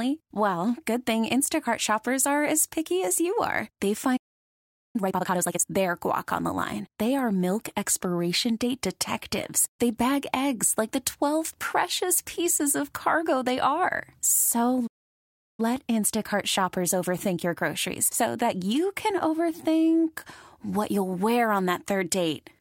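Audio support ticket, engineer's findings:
Playback stall, 4.16–4.96 s: speech cuts out mid-flow, about 0.78 s of silence. Likely cause: player buffer underrun or blocked audio thread. Resumes where it stopped.

Time-compressed catch-up, 4.96–5.72 s: backlog drained at 2x speed, pitch unchanged, cut-and-crossfade splicing. Normal pace returns by "guac on the line".

Playback stall, 14.87–15.60 s: second dropout, about 0.72 s of silence, same likely mechanism.

Time-compressed catch-up, 15.60–18.60 s: gentler 1.1x hurry over 3 s, pitch held. Ends before "you can overthink what".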